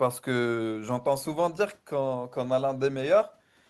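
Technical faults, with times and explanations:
No technical faults are audible.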